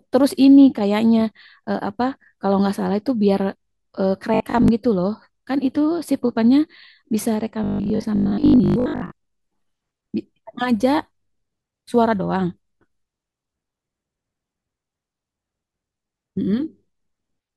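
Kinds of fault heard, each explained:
Robotic sound from repeated short buffers: speech turns into a rigid 50 Hz metallic buzz, likely from a 20 ms buffer replayed, at 4.3 s and 7.6–9.1 s.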